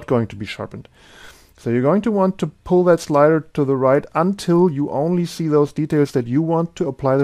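Nothing in the audio stood out as a problem on listening.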